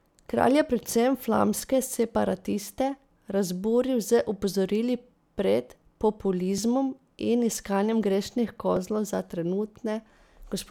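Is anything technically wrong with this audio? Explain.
Yes. The speech has three brief jumps in the sound, at 0.96 s, 6.58 s and 8.77 s, where a few milliseconds of audio vanish and the surrounding material butts together with no gap. The likely cause is a dropped buffer (overrun): the recording software fell behind, the hardware overwrote a block of samples before it was read, and the two ends were spliced directly, producing the abrupt skip.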